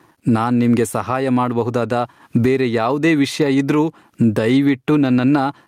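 Gain pumping runs through the whole speech clip. The level swing is large, somewhere around 20 dB. Loud and quiet passages sit closer together in level, so the speech sounds flattened and squeezed. The likely cause is input gain set far too high, with a fast limiter or compressor clamping down on each loud syllable.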